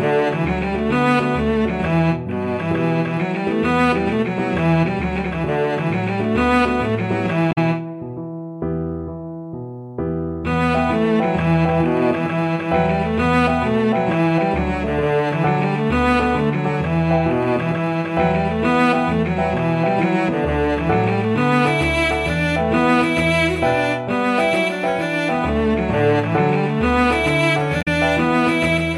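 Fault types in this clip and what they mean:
Damaged data in a compressed stream: corrupted bytes in the encoded stream make the decoder misread frames and lose sync while it hunts for the next valid frame header, heard as two short blips of about 70 ms each, at 7.51 s and 27.81 s.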